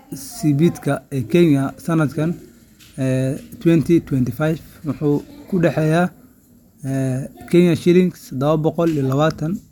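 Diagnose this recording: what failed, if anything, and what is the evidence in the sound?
Nothing failed: no dropouts, clicks, clipping, or level and timing disturbances show up anywhere in the recording, so no stage of the chain leaves any evidence of a fault.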